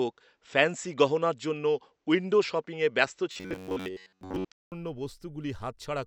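From the start to 4.72 s, the sound is dull and narrow. A 200 ms silence marks the change back. The level shifts by a few decibels, and a faint new noise floor appears. The likely cause is an input switched to a poorer device.

From 3.32 to 4.45 s, the sound turns rigid and metallic. A fixed buzz sits at 93.8 Hz. That fits a buffer of about 10.7 ms being repeated. Most of that stretch is repeats. This is likely robotic sound from repeated short buffers.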